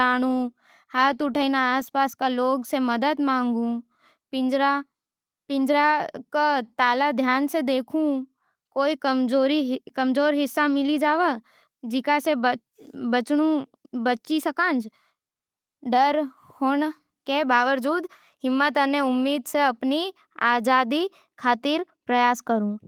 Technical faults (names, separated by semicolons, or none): none